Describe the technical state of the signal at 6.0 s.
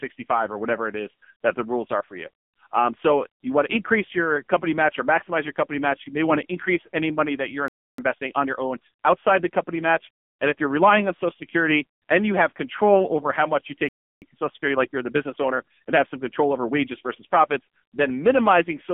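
AMR narrowband mobile codec at 6.0 s, as throughout: heavy buzzy, synthetic damage from a pulse-driven vocal-tract model, nothing above 3.5 kHz, consistent with about 6.7 kbps.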